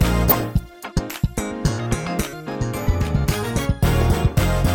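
A burst of short noise blips in single frequency bands sits on the sound from 0.29 to 0.44 s, and again from 4.00 to 4.11 s. This is DAB burbling: weak reception let bit errors slip past error correction into the MP2 data, at a rate of something like a few errors per thousand bits. Corrupted samples put short noise blips in single sub-bands, and corrupted scale factors make sub-bands jump in level for up to a frame, which fits around a dozen damaged frames in the first burst and slightly fewer in the second.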